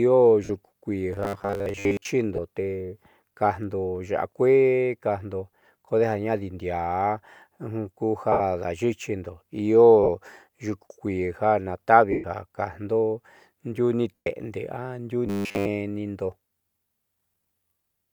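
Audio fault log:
0.44–0.49 s, 2.36–2.39 s, 8.32–8.40 s, 10.03–10.08 s, 12.12–12.24 s (just before "ja kajndo"), 14.18–14.27 s (just after "ndiuu ni"), lost LE Audio frames: gaps of 52.5, 22.5, 75, 45, 120 and 120 ms where the LC3 decoder re-plays the last spectrum with scrambled phase. The speech turns to a brief unpitched hiss that sinks toward silence in the two 120 ms gaps, with no steady buzz.
1.13–2.07 s and 15.27–15.68 s, robotic sound from repeated short buffers: the speech takes on a rigid metallic buzz fixed at 100 Hz that still loosely tracks the syllables. This is likely caused by a 10 ms chunk being looped while fresh audio is skipped. About 70% of the first stretch is repeated and essentially all of the second. Unlike the frame losses, it is pitched and sustained rather than a fading smear.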